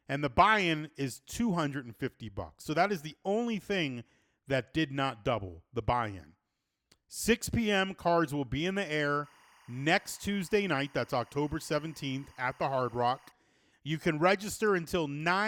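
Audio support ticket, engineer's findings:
Timecode bleed, 9.24 to 13.32 s, right after "will be in the". Chirpy warble sits about 30 dB under the speech, flipping between roughly 1 and 2 kHz. Looks like 24 fps LTC leaking from an adjacent track or cable. Worth checking the routing.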